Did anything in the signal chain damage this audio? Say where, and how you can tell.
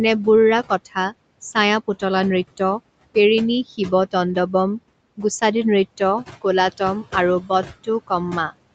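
Yes. Noise suppressor artifacts run through the whole clip from the call-processing stage. Gaps between phrases sink about 21 dB, and the remaining noise rises under the speech. On a spectrogram, the pauses go almost black and the speech carries flickering, mottled speckles, because the suppressor sets each band's gain frame by frame.

The same stage also causes speech cut by the noise suppressor at 0.69–1.13 s (about 13 dB deep, with roughly 150 ms affected) and at 7.41–7.5 s, right after "গুছাদি নৃত্য কোলাতম আৰু" (about 12 dB). The waveform envelope sags there. The suppressor took soft speech for noise, so its energy fades along with the background.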